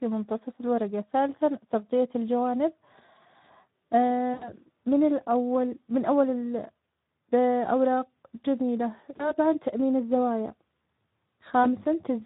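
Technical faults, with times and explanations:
Throughout, Speex codec: the speech sounds plainly coded, grainy and hoarse, with a thin, noisy texture in place of natural detail. This is the CELP coder's signature at a modest bitrate, consistent with around 11 kbps. Too few bits go to the excitation signal, so the decoder rebuilds each frame's source from a coarse approximation and the error comes out as this hoarse graininess.
4.33–4.51 s, 9.18–9.34 s and 11.63–11.68 s, VoIP packet loss concealed by the speech codec: at each point the speech briefly smears into a stretched sound that fades, then takes a moment to come back cleanly. The first gap is the longest, about 80 ms of lost audio, and the later two are about 20 ms each. The decoder filled the missing frames by repeating its last pitch and filter at falling gain, and recovery lagged because each frame depends on the last.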